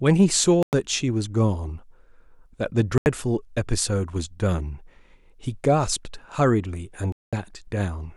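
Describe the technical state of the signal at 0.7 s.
At 0.7 s the speech is missing: a Bluetooth dropout silences the output from 0.63 to 0.73 s, roughly 100 ms, with abrupt or briefly faded edges. The likely cause is wireless packets arriving too late and being discarded, and the speech resumes further along, as though it had kept playing.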